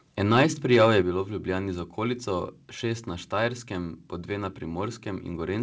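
At 0.31 to 0.43 s and again at 0.73 to 0.88 s, the loudest peaks turn harsh and crackly. This is microphone overload. The input level is likely set too high, so the peaks overshoot the converter's limit by about 4 dB and their tops are sheared flat. A few percent of samples are clipped each time. The second burst ends just before "je bilo v". The flattened tops add a gritty edge to those syllables.

At 1.02 s the microphone volume is stepped down. The whole sound, background included, drops abruptly by about 6 dB, just before "bilo v". This is likely the call software reacting to the clipped peaks and lowering the device's input volume in a single step. It follows the second overload closely. The change is a sudden step, not a gradual fade, and the level stays lower afterwards. The G.722 call path carries nothing above 8 kHz.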